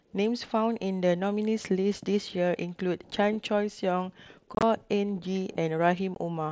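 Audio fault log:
4.55 to 4.63 s and 6.15 s, unconcealed Bluetooth headset packet loss: the first spot is a cluster of short holes spread over about 75 ms, the longest a 22.5 ms gap, so it sounds like a rough chopping burst. The second is two lost frames, 15 ms in all. The headset-to-phone link dropped voice packets and nothing filled them in, so silence just cuts in, and the gaps fit lost 7.5 ms mSBC frames on the wideband link.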